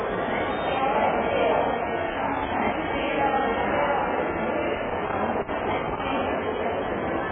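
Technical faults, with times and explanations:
Throughout: AAC compression, and heavy at that. Nothing gets through above about 3.7 kHz, so the whole clip sounds dull and boxed in, and what's left has that smeared, warbly, fizzy texture where the encoder has starved bands and patched them over. It likely comes from an AAC-LC encode at a very low bitrate, somewhere around 8 kbps. The coder simply didn't have enough bits to hold the detail, so it cut the top end and guessed at the rest.
2.10 to 2.92 s and 4.75 to 6.09 s: loose connector crackle, two separate bursts. Each is an irregular spray of scratchy crackle riding on the sound, lasting a bit under a second the first time and about 1.3 s the second. That's a worn or dirty contact shifting and briefly breaking, chopping the signal on and off. Any DC on the line turns each break into a pop.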